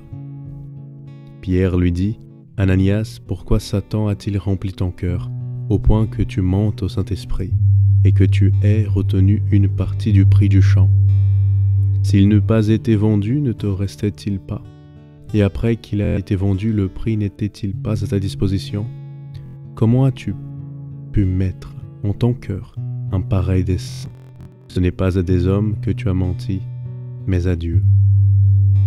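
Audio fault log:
16.05 to 16.18 s: Bluetooth stutter. About 116 ms of audio goes missing, and the receiver fills the gap by replaying its last short buffer over and over, so a brief mechanical buzz takes the place of the sound. When data returns, playback picks up further along, as though the missing stretch had played unheard.
19.46 to 19.56 s: Bluetooth stutter. A shorter dropout of about 93 ms gives the same result: a quick machine-gun repeat of one small slice, then a jump forward as the stream recovers.
23.83 to 24.77 s: Bluetooth stutter. This is the worst stretch. Losses add up to about 627 ms spread across roughly 0.93 s, and the longest single run lasts about 163 ms. The frozen buffer loops again and again, broken by short returns of real signal, which makes a ragged, stop-start buzz. After each gap the sound resumes later in its timeline, so material is skipped as well as looped.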